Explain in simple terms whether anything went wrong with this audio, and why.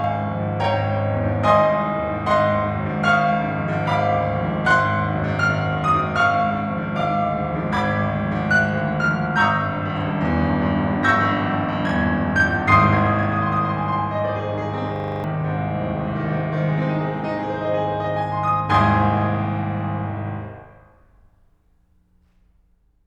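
Two things went wrong. The first runs through the whole piece of music: a channel delay, or doubling. One side of the stereo signal arrives 40 ms late, and when the two sides are mixed into one, every sound is heard twice, a fraction apart and equally loud. That even level and fixed gap are what separate it from a room echo, which would come back quieter and smear out rather than repeat as one clean copy.

The second is a system hang loop from 14.96 to 15.24 s. The computer briefly froze while the sound hardware kept replaying the same 40 ms scrap of audio, seven times in a row. Repeating at 25 times a second, it comes across as a rapid, rattling stutter instead of the music, and around a third of a second of the piece is lost. Unlike the doubling, which copies everything once, this repeats one identical fragment many times and then jumps ahead.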